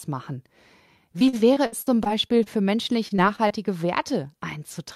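From 1.19 to 2.48 s, the speech suffers repeated packet loss (robotic sound). Audio keeps arriving late or not at all, and each hole, the longest about 57 ms, is papered over by extending the last sound. Roughly a fifth of the stretch is concealed, so the speech turns choppy with pieces missing. A shorter burst of the same loss hits from 3.08 to 3.52 s, with gaps up to about 23 ms, giving a brief choppy stretch.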